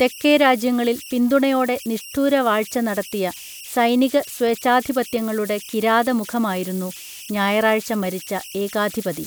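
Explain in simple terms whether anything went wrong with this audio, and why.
Converter idle tones run through the whole recording, from start to finish. The part of the recording chain that turns sound into digital data was left without the small random noise that normally keeps it honest. When the speech is quiet, it slips into repeating patterns, and those patterns come out as a high whistle somewhere around 3 kHz. You hear it most in the pauses, and as a grainy hiss underneath the softer parts of the speech.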